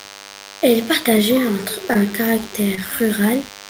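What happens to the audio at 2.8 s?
Around 2.75 to 2.79 s there is a short concealed packet loss. About 20 ms of the call never reached the decoder in time, and the receiver filled roughly 24 ms by extending the preceding sound: its pitch if voiced, shaped noise if not. It then cross-faded back into the real audio. The result is a brief smear or wobble lasting a few hundredths of a second. On a spectrogram the harmonics or noise band run unnaturally flat and repetitive through the gap, and the waveform shows copied cycles with no new onset.

Underneath that moment, as in the whole clip, is a DECT cordless phone buzz. A nearby handset or base station sends a radio burst every 10 ms, and the audio circuit rectifies it into a thin, steady 100 Hz buzz with many harmonics, sitting about 20 dB below the speech. On a spectrogram it forms evenly spaced horizontal lines at multiples of 100 Hz. The waveform shows a regular 10 ms pulse pattern, clearest in pauses.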